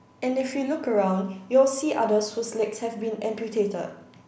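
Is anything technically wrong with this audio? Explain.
No, nothing in this speech recording points to a technical fault.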